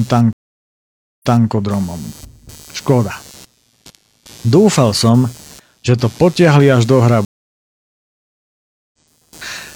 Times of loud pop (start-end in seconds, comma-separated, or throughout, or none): none